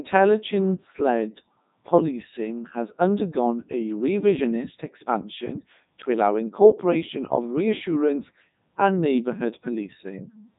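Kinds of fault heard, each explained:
Codec 2 vocoder: the speech has been squeezed through a very low-rate digital-radio vocoder, apparently running at its top rate of 3.2 kbit/s, which transmits only pitch, voicing, energy and a coarse spectral envelope rather than the waveform itself. The decoder rebuilds the speech from sine waves, so the whole clip sounds robotic and buzzy, with heavy codec damage throughout and nothing present above about 3.8 kHz, leaving it dull and band-limited.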